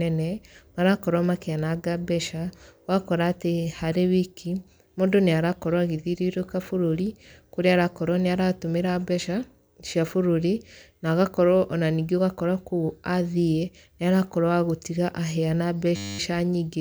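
A system hang loop hits this speech clip from 15.96 to 16.19 s, near the very end. The host or driver stalled while the audio hardware kept replaying the same stretch of its ring buffer, so a single 10 ms slice repeats exactly, 23 times in a row. Because the looped slice is so short, it turns into a steady buzz at 100 Hz rather than a stutter. Essentially no audio is lost when playback resumes.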